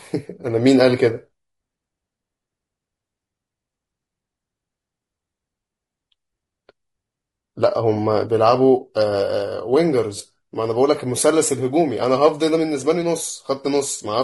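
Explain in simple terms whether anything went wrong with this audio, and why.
Throughout the clip, the speech sounds rough and grainy, with a hiss between the tones of the voice. The top end seems thin or artificial. The likely cause is low-delay AAC compression, built for video calls, which chops sound into very short pieces and loses fine detail.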